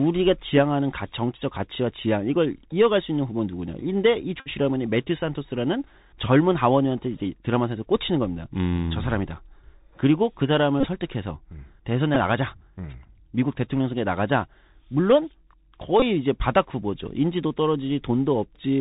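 The Bluetooth CVSD headset codec runs from start to finish, with plainly audible damage. Its one-bit slope coding at a rate that fits CVSD's 64 kbps cuts everything above 4 kHz, makes sibilants scratchy, lets loud bright sounds distort, and leaves a granular hiss beneath the speech.

Bluetooth headset packet repeats come at 4.40 to 4.49 s (60 ms lost, about sixteen 3.75 ms packets), 10.80 to 10.87 s (37.5 ms scattered over 45 ms, the longest run about 30 ms), 12.15 to 12.16 s (11.2 ms) and 16.00 to 16.03 s (22.5 ms). Lost packets were replaced by the previous packet's bits, so each run becomes a rough buzz near 267 Hz.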